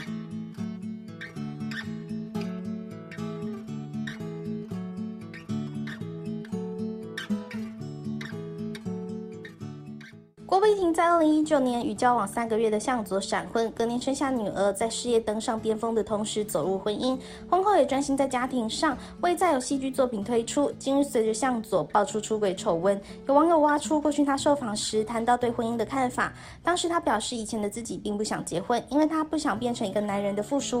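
No technical faults can be heard anywhere in the audio; the signal holds steady and continuous throughout.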